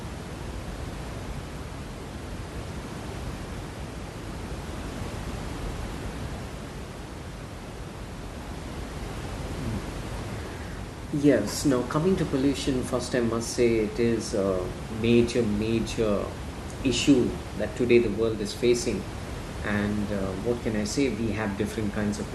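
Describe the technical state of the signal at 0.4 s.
At 0.4 s the audio is intact, with only the room's own background noise sitting about 10 dB below the speech as part of the recording.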